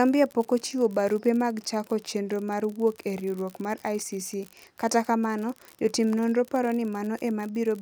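From start to finish the speech carries an unreliable data bit. One marginal line flips randomly, adding equal spikes of about -26 dBFS. A steady fizzy crackle continues through pauses.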